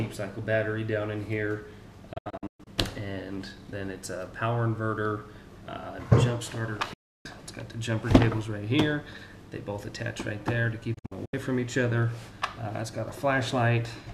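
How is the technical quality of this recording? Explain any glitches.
Three digital broadcast dropouts mar the recording, at 2.13 s, 6.93 s and 10.94 s. Each time the receiver stopped getting valid frames and muted until clean ones returned. The sound ducks to silence through an 8 ms fade rather than clicking. The first event loses 312 ms in several holes over 0.53 s, the longest 120 ms. The second is a solid 312 ms gap. The third loses 192 ms in holes spread over 0.38 s, the longest 72 ms. The gaps come in steps that fit frames of about 24 ms. Unlike analogue fading or noisy reception, there is no hiss or gradual degradation. The audio simply stops cleanly, the missing material is gone, and the sound resumes later.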